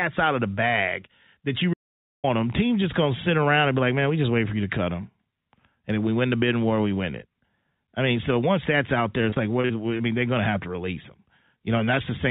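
From 1.74 to 2.24 s the speech cuts out abruptly into half a second of dead digital silence, with no room tone underneath, and resumes mid-flow. This audio dropout to silence is likely a briefly lost input that kept being recorded as silence.

Between 9.3 and 10.01 s, within the band-limited sound of the call path, where nothing reaches above 4 kHz, the speech turns choppy. This is repeated packet loss producing robotic sound: about five short holes, the longest 38 ms, were each patched by stretching the preceding sound, so roughly 120 ms of material is missing.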